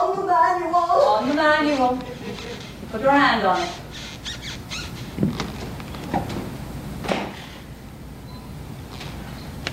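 No technical faults are audible.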